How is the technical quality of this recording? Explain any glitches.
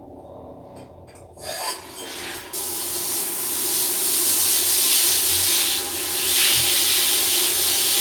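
Nothing here sounds off: there are no glitches to explain, and the recording holds together nicely all the way through.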